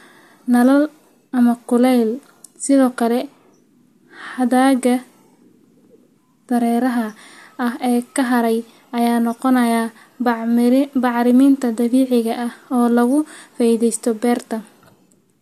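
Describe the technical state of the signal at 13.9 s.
At 13.9 s the speech signal is intact, with no audible fault at that moment.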